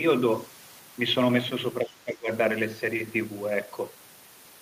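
From 1.84 to 2.3 s the speech drops in level. At its deepest the dip is around 15 dB. Most of that stretch is affected, about 0.4 s in all. Then the level recovers. This is speech suppressed in double talk. The likely cause is an echo canceller facing both sides talking at once. It cannot tell the near talker from the loudspeaker echo. So it turns everything down.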